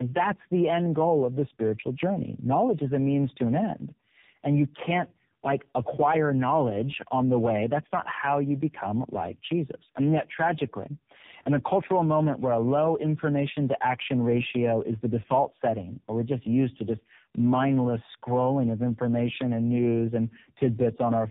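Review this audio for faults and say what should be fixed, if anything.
Tandem speech coding throughout: three successive speech coders each re-encode the previous one's damage, leaving rough, warbly, muffled speech with nothing above 3.7 kHz, consistent with low-rate AMR-NB. Prevent it by carrying the coded speech end to end without decoding and re-encoding at each network border.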